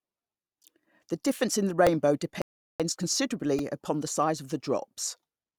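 At 1.87 s a tiny click-like buzz cuts into the speech, a repeated buffer. A very short slice of audio, about 1.45 ms long, plays again back to back with hard joins, which fits a 64-sample buffer being replayed a couple of extra times because fresh audio reached the device late. At 3.59 s the same buzz returns, slightly longer, pointing to the same small buffer repeating around four more times. Little or no speech seems to be skipped either time.

From 2.42 to 2.80 s the speech drops to silence for about 0.38 s and then picks up exactly where it stopped. This is a rebuffering stall. The player used up its downloaded audio and waited for more to arrive before continuing. No speech is lost, but the pause adds that much time to the clip.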